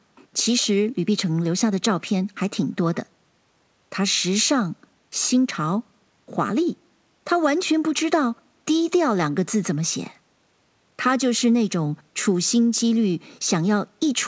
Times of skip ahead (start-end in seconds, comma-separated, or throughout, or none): none